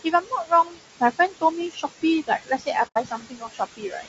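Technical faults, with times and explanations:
Throughout: noise suppressor artifacts. The room noise, sitting about 10 dB below the speech, is pulled down by about 16 dB in the gaps and swells back under each phrase. Unlike a plain noise gate, this pumping is uneven across frequency, not a single level step.
Throughout: low-delay AAC compression. The voice is rough and grainy, with noise filling the spaces between harmonics and a dull, synthetic-sounding top band. The damage is plainly audible and fits the short frames of AAC-ELD at around 32 kbps, likely the cause. It differs from the suppressor's warble by riding on the voice itself rather than the background.
0.04–0.79 s, 1.70–2.04 s, 2.27–4.08 s: speech cut by the noise suppressor. The suppressor mistakes parts of the speech for noise and turns them down with the background. Soft consonants and word endings sound swallowed, by about 15, 16 and 21 dB at worst, over roughly 0.4 s, 0.2 s and 1 s in total. 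It tracks the speech's quiet parts, unlike a dropout, which ignores content.
2.87–2.98 s: AAC frame loss with muting. About 90 ms of audio vanishes, a span that fits three lost frames, which the decoder replaced with silence. The overlapping windows fade the sound out and back in, so the hole has soft edges. That sets it apart from a hard cut and from the suppressor's partial dips.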